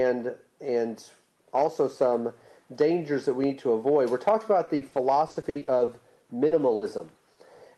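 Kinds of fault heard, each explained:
Repeated packet loss (robotic sound): Lost packets leave gaps up to 60 ms, each filled by repeating the last sound. Two stretches near the end turn choppy and robotic.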